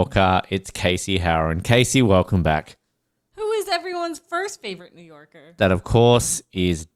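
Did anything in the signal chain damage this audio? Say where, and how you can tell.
No, nothing in the signal chain has damaged this speech recording. At no point in the audio can any stage be heard interfering with the signal.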